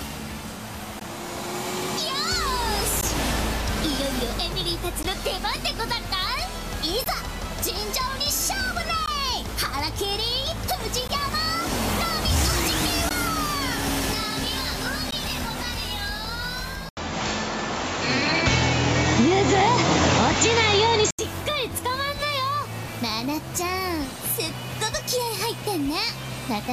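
Brief dropouts of about 16 ms, recurring every 2 s, at 1.0, 3.01, 5.03, 7.04, 9.06, 11.08, 13.09 and 15.11 s: gaps at joins of encoded pieces, where each separately encoded segment kept its padding. From 16.89 to 21.19 s, after an 80 ms silence, the sound narrows with nothing above 7.6 kHz, shifts in level by roughly 5 dB and gains a noise floor around 30 dB down, likely an input switched to a poorer device.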